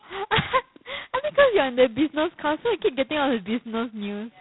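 Throughout the speech, G.726 ADPCM coding leaves a harsh, rasping hiss that rises and falls with the speech level, consistent with about 16 kbit/s, where two bits per sample barely track the prediction error. A spectrogram shows nothing above 3.9 kHz, and the waveform carries grainy noise riding on every syllable.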